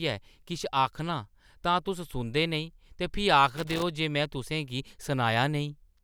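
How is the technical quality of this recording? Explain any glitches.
The recording has one glitch: a burst of loose connector crackle from 3.54 to 3.82 s. A worn or dirty contact somewhere in the cable or jack path was briefly making and breaking, so the signal was chopped on and off in quick, uneven succession, with pops where any DC on the line jumped. It sounds like ragged scratching. Unlike a digital dropout or buffer click, which tends to be a clean gap or evenly spaced ticks, this crackle is irregular and gritty.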